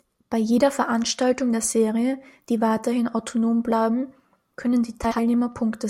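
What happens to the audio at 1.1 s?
Nothing goes wrong at 1.1 s; the speech carries on intact through that moment with no dropout, click or distortion.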